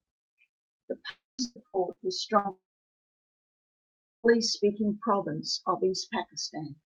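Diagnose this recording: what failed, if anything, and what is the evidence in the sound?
The network stage most likely suffered a long network dropout, twice. From 1.09 to 1.41 s about 300 ms of speech never arrived. The receiver extended the last sound as a fading buzz or hiss, and the final 0.2 s or so is silence. A second dropout runs from 2.51 to 4.32 s and loses about 1.74 s. After a brief concealed tail, roughly 1.6 s of silence follows before speech returns at "speaking province of", with the lost material simply gone.

A burst of packet loss struck the network path four times between the two dropouts, at 1.44 to 1.59 s, 1.68 to 1.77 s, 1.92 to 2.00 s and 2.39 to 2.47 s. The first gap removes about 120 ms and the other three about 60 ms each. In each case the receiver's concealment held the last sound and let it decay into a short buzz or hiss. The speech then jumps ahead, so a chunk is missing at each point.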